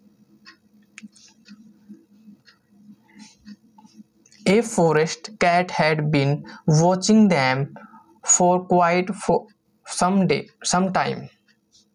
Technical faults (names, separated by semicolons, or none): gain pumping